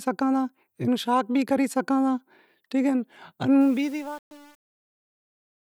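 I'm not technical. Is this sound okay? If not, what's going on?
No. Truncation distortion on a fade runs from 3.61 s to the end at 5.63 s, worst from 3.66 s. As the speech fades out, the quiet tail is stored too coarsely, likely only about 7 bits without dither, so it turns gritty.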